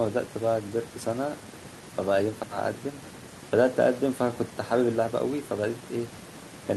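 The speech audio has no technical faults at any point, with nothing audible that points to a problem in how it was captured, processed or delivered.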